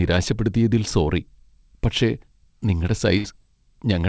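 At 3.18 to 3.26 s, a burst of packet loss: about 60 ms is concealed by continuing the last sound and fading it down, then the sound skips ahead. Unlike a plain dropout, the gap isn't silent. The G.722 call path keeps everything below 8 kHz.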